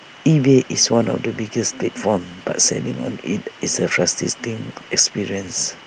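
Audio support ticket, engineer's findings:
Listened to the full speech recording and nothing stood out as a fault worth logging.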